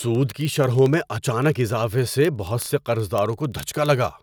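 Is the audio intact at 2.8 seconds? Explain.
No, 2.8 s falls within word clock ticks running from 0.11 to 4.19 s. The receiving clock runs several hundred ppm off the sender's, so a single sample slips roughly every 40 ms, giving sharp ticks of uneven strength at an even rate. Unlike dropouts, there are no gaps.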